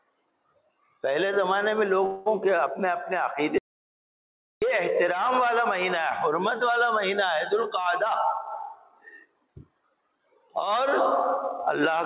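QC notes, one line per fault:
2.06–2.28 s, call audio freeze: the sound smears into a fading buzz for about 0.2 s, then resumes where it stopped. The jitter buffer likely ran empty while packets were delayed, so nothing is lost.
3.58–4.62 s, audio dropout to silence: the sound cuts off mid-flow into dead digital silence with no room tone for about 1.04 s. The input was likely lost and silence was written, so that stretch is gone.
8.99–10.62 s, jitter buffer speed-up: the sound runs hurried, about 12% fast, at unchanged pitch. The receiver trimmed pitch-period slices, around a fifth of a second in total, to shrink an overfull buffer.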